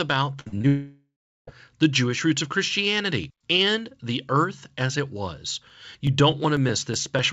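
Repeated packet loss with a robotic sound runs from 0.40 to 0.65 s in this speech recording. Packets went missing over and over, and each hole, the longest about 58 ms, was bridged by stretching the last bit of audio. About half of that quarter-second is this patched-in material, so the speech turns choppy and robotic, with fragments gone. A long network dropout follows from 0.67 to 1.49 s, and that is the likely cause of what is heard: roughly 0.8 s of audio never arrives. The receiver first extends the last sound as a fading buzz or hiss, then falls to silence for about 0.38 s. The speech resumes afterward with the missing stretch lost for good. Periodic USB or driver dropouts start at 5.7 s, just after "earth as it was", and continue to 7.19 s. Something was stalling the audio driver or USB transfer every 0.124 s, and each stall skipped about a millisecond of signal outright. The result is a regular train of around fifteen small ticks, audible only where speech is present. 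All of this passed through a call path whose band stops at 8 kHz, which fits the G.722 wideband codec. That codec's coding noise sits under the speech throughout.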